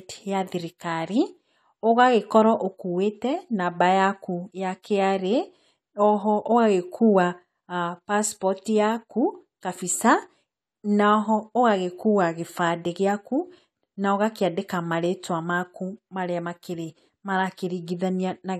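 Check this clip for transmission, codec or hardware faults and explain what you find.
One codec fault is audible: pre-echo at 4.82 s, just after "namba yakũ ya". A short hiss runs ahead of a sharp speech onset by about 16 ms, and the attack itself sounds softened. The transform codec spread quantisation noise across its whole block, so noise scaled for the loud onset also filled the quiet gap before it. On a spectrogram this shows as a thin broadband smear just before the onset. The waveform shows low-level grain rising before the transient.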